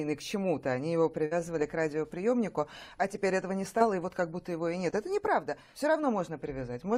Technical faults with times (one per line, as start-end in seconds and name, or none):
1.25-1.41 burst of packet loss
3.79-3.82 short concealed packet loss
4.90-4.94 short concealed packet loss